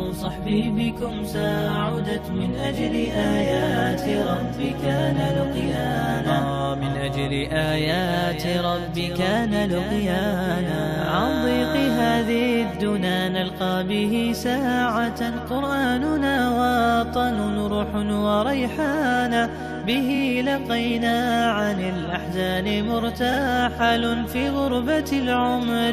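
Two quick stutters in the audio come from repeated frames: at 20.14 to 20.19 s a 23.2 ms block plays twice more, and at 23.33 to 23.37 s a 46.4 ms block plays once more. Each adds 46.4 ms, which fits compressed frames being written or sent again.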